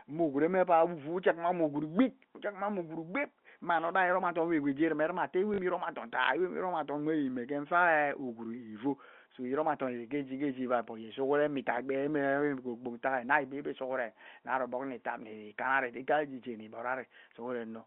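A speech recording carried over a telephone line, with two audible faults. From 3.72 to 3.94 s there is a wireless microphone noise hit. A short swish of static rises as the analogue FM radio signal fades, and receiver noise briefly rises before "iroma adom wewe ghee". From 5.54 to 5.58 s comes packet loss with the last packet repeated. A 40 ms gap, which fits two lost 20 ms packets, is filled by replaying the previous packet. It gives a brief robotic stutter just before "mme iroma adom taa". The G.711 A-law telephone coding keeps the 200 to 3400 Hz line band, and its own damage is at most faint.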